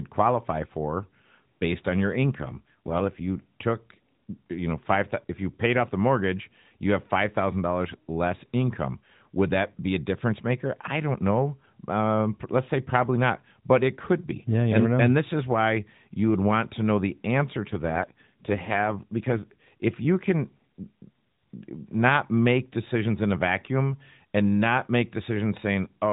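From 2.16 to 3.44 s, after "for based on your", and from 17.68 to 19.68 s, after "to know the answer", an AMR rate drop roughens the speech and makes it more synthetic and buzzy, which fits a switch from 12.2 to 5.9 kbps. The narrowband band and continuity stay intact.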